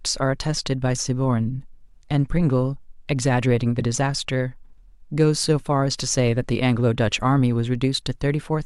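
No technical faults can be heard anywhere in the recording. The speech continues without any audible break or disturbance in the signal.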